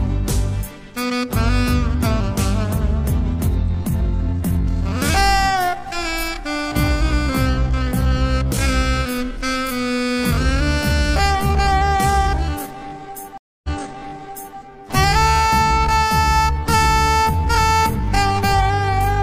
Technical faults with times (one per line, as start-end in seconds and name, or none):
3.61-19.23 time-stretched section
13.38-14.58 stream reconnect